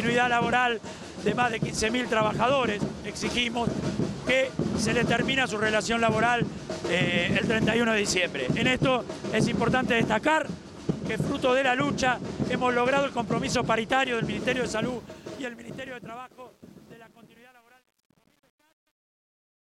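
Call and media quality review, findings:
Truncation distortion on the fade-out, 14.39 s to end. Gain stage keeping too few bits, undithered, which fits about a 9-bit word length. As the fade from roughly 14.4 s drops toward the smallest step, the waveform collapses into coarse square steps: gritty, worst 15.54 s to 19.77 s.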